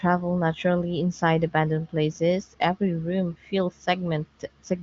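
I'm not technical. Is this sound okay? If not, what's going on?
Yes, this sound is okay, with nothing going wrong in it.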